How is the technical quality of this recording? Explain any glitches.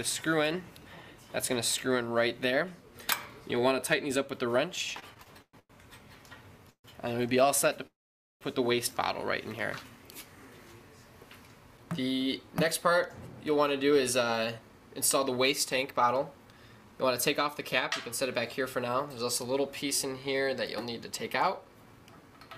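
The recording has clear network-playback glitches: a run of stutters, two freezes, and two stretches that play back hurried.

Repeated stalls (stutter), 4.99–5.71 s: packets kept arriving too slowly, so the jitter buffer emptied six times. Each gap, the longest 113 ms, was filled by extending the last sound. About 0.3 s was bridged this way, roughly 42% of that span, so the audio drags and stutters without losing content.

Call audio freeze, 6.70–6.86 s and 7.87–8.43 s: the sound holds and fades and then drops out, for 0.14 s with about 80 ms of silence, then 0.54 s with about 470 ms. Playback resumes where it stopped. The likely cause is delayed packets running the jitter buffer dry.

Jitter buffer speed-up, 13.32–17.45 s and 18.60–22.46 s: too much audio had built up in the buffer. The receiver trimmed tiny pitch-period slices repeatedly, removing around a third of a second in each stretch. 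The sound runs 6% faster at unchanged pitch and feels slightly rushed.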